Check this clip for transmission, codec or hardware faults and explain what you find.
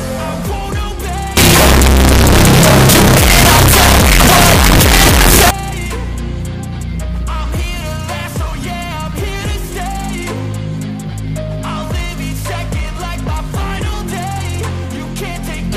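One fault is present, from 1.37 s to 5.51 s: a stretch of very loud, harsh distortion in which quiet parts hit as hard as loud ones. The likely cause is signed and unsigned mixed up on the 8-bit samples. Reading them with the wrong convention flips the top bit, so every zero crossing swings across the full range.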